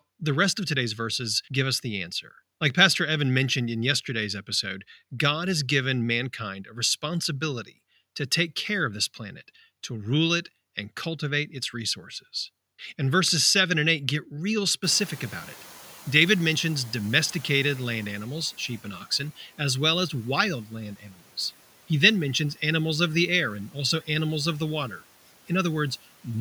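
Speech, with two noise-suppression faults. After "get real", the room noise jumps by about 25 dB around 15 s, and from 14.83 to 18.24 s it comes through too loud before gradually sinking by about 8 dB. This is the noise suppressor catching up: its noise estimate needed about 3.4 s to follow the sudden rise. Just after "well as wild land", at 21.0 to 21.23 s, the sound briefly goes faint and swallowed, dipping by up to about 12 dB for roughly a fifth of a second. This is speech cut by the noise suppressor, which mistook that stretch for background noise.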